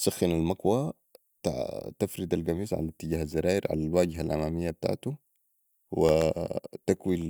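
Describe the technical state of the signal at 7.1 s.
Regular ticks every 0.125 s through the speech, from 6.09 to 7.22 s: periodic USB or driver dropouts, where stalls briefly cut roughly half a millisecond to silence.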